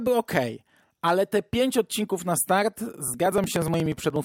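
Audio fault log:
3.08–4.16 s, periodic USB or driver dropouts: A rapid, evenly spaced ticking rides on the speech, some twenty small clicks at a steady 60 ms interval, heard only while the voice is sounding. Each tick is a gap of a few milliseconds where audio is skipped rather than filled with silence, so the waveform jumps abruptly across the missing stretch. The fixed spacing points to a background task regularly stalling the USB bus or audio driver.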